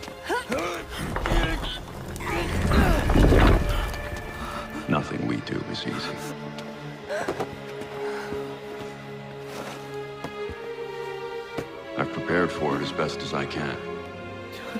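At 7.10 s and 13.09 s, an overlap between stream segments trims a few milliseconds, so the waveform jumps ahead in a tiny skip rather than a silent dropout, recurring with the 6-second segment spacing.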